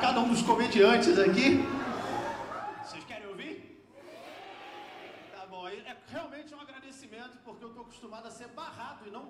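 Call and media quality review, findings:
No technical faults were found; the signal stays continuous with steady timing, and its smooth level changes are normal fader moves.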